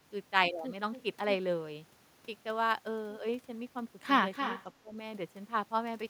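Speech, with two faults near the end. From 4.33 to 4.64 s, an echo leak brings back a delayed copy about 281 ms late, roughly 10 dB down, likely from a loudspeaker echo that was not fully cancelled. From 4.79 to 4.97 s, the speech is suppressed in double talk. It dips by as much as about 25 dB, likely because the echo canceller muted the talker while both sides spoke.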